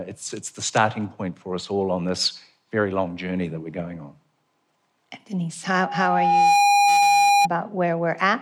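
From 5.71 to 7.48 s, there is loudspeaker feedback squeal. The microphone re-amplifies its own loudspeaker at 811 Hz. That single tone swells over about a second to roughly 10 dB above the speech.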